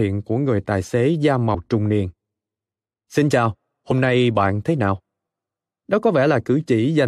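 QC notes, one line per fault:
1.53 s, compressed frames skipped: the speech jumps forward by about a tenth of a second, which points to roughly four whole codec frames of about 23 ms each being lost or rejected by the decoder as damaged.
3.90 s, compressed frames skipped: a shorter jump of about 50 ms, which fits two dropped frames.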